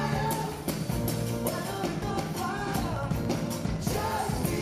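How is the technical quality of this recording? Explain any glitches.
The recording has two separate faults, one brief and one lasting nearly two seconds.

At 2.02 s there is damaged data in a compressed stream. Part of the encoded data at that point was corrupted, so the decoder could not read the affected frame correctly, lost its place, and had to hunt for the next valid frame header before it could carry on. The result is a single short disruption, heard as a chirp, click or momentary gap, where the audio may also skip ahead.

From 2.75 s to 4.58 s a train of clicks runs over the sound. Something is likely injecting a repeated electrical pulse, whether interference from nearby equipment, a faulty connection or an unstable power supply. The pulses arrive at a steady 13.8 per second, around forty in all, each of much the same shape and peaking roughly 5 dB above the surrounding signal. 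That regularity is heard as an even ticking laid on top of the audio.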